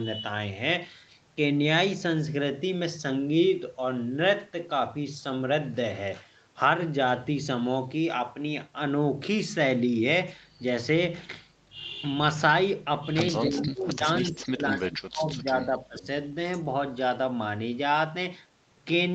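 It's a speech recording, and the trouble sits between 13.46 and 16.07 s, where the talker's level keeps getting pulled down in pieces, adding up to roughly a second and a half and dipping as far as about 25 dB at worst. That's speech suppressed in double talk, likely the far end talking at the same moment so the echo canceller ducked everything it couldn't sort out. Mixed into that same stretch you can catch faint delayed copies of the voice at 13.56–13.63, 14.41–14.48 and 16.02–16.07 s, each trailing by about 0.28 s. The first sits about 15 dB under the speech and the other two about 25 dB under. That's echo leak, the likely cause being a speakerphone whose canceller let some of its own playback slip back into the call. Through all of this, the call path's top end stops around 8 kHz, which is just what the Opus codec does here.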